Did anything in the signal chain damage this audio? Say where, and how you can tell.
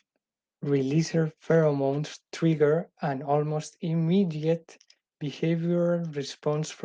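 No, nothing along the chain has left a mark here; the speech comes through without any sign of damage at any stage.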